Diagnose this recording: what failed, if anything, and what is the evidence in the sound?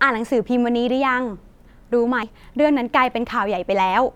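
At 2.23 s the speech jumps forward with no silent gap, losing roughly a tenth of a second. The likely cause is a dropped buffer (overrun) in the driver or buffer stage: samples were overwritten before collection, splicing the surrounding audio together.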